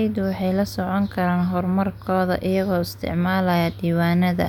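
Speech, with no technical fault anywhere in the recording. There is nothing here that calls for a time stamp or a cause.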